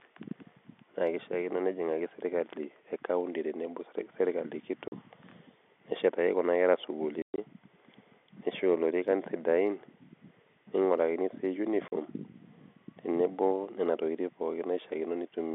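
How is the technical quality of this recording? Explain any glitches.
The recording is marred by packet loss filled with silence, occurring three times over a telephone-band G.711 line that passes roughly 200 Hz to 3.5 kHz.

At 4.88 s, around 7.22 to 7.38 s, and at 11.88 s, lost packets were replaced by silence. The dropouts last 40 ms, 140 ms (longest run 120 ms), and 40 ms, which fits 20 ms packets. Each one sounds like a hole with hard edges, seen as flat-line gaps in the waveform and blank vertical strips on a spectrogram.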